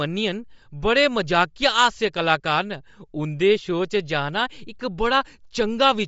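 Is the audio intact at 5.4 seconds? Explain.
No. At 5.4 seconds the speech carries Bluetooth LC3 compression, which runs through the whole clip. Nothing is heard above 7.7 kHz. The coder likely discarded upper spectrum in 10 ms frames, fitting roughly 32 kbps. The damage is plainly audible as a grainy edge.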